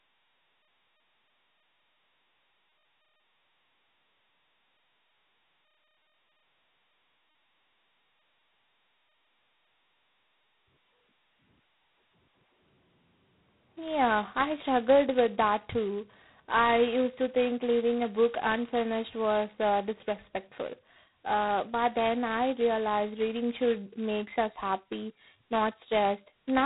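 A speech recording carries G.726 ADPCM damage from start to finish. The encoder sends only a few bits of prediction error per sample, so a harsh, rasping hiss rides on the speech and swells and fades with its level, heavy enough to suggest the 16 kbit/s mode. On a spectrogram, nothing appears above 3.9 kHz, and grainy noise fills the band under every syllable. The waveform looks fuzzy and thickened through loud passages.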